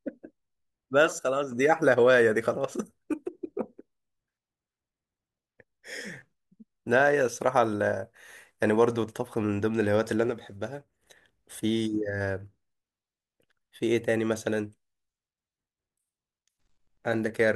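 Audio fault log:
1.19–1.52 s and 10.30–11.01 s, one channel drops out: a stereo channel was likely lost for about 0.3 s and then about 0.7 s, so in the mono sum the speech shared by both sides falls abruptly by about 6 dB, and anything only in that channel vanishes.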